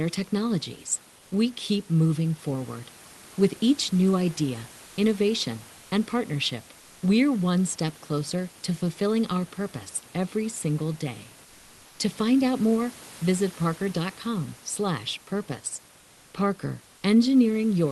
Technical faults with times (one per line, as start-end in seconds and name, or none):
4.85-4.97 comfort noise in place of the background
5.77-5.91 comfort noise in place of the background
6.79-7.01 comfort noise in place of the background